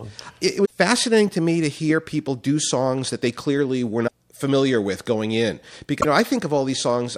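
Speech clip with three short glitches, at 0.64–0.71 s, 4.06–4.13 s and 6.00–6.05 s, where the audio skips ahead and comes out mangled for a moment. Each lasts two or three 26.1 ms frames, likely a broken MP3 bit reservoir.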